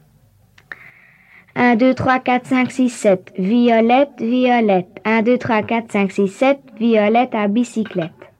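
No technical faults can be heard anywhere in the audio.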